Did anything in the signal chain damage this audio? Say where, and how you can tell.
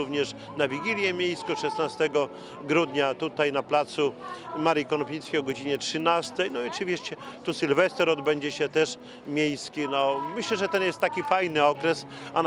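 Yes, at the sample-rate converter stage. From 4.5 s to the end, faint ticks repeat at 4 per second, every 250 ms. This is a resampler restarted on every block, consistent with 24 kHz to 48 kHz conversion, with edge errors at each block boundary. Unlike hum, the ticks vanish when signal stops.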